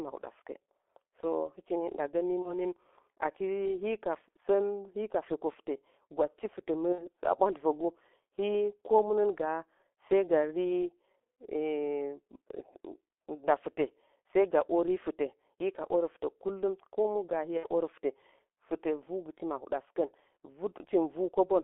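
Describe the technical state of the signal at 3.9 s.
G.723.1 codec damage is present at 3.9 s, as it is across the whole clip. The speech is held within a telephone band of roughly 300 Hz to 3.5 kHz and rebuilt from a coarse voice model refreshed only every 30 ms, which fits a rate of about 6 kbit/s. The result is muffled, hoarse speech with smeared consonants. Unlike plain band-limiting, which only dulls the sound, the heavy hoarseness and blurring here come from that slow model.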